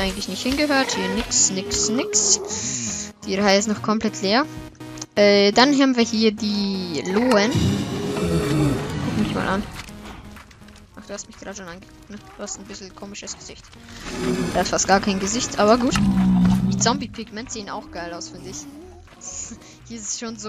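From 16.44 to 17.37 s, zipper noise appears. The level falls about 15 dB in unsmoothed 3 dB steps, roughly five a second. Each step ticks.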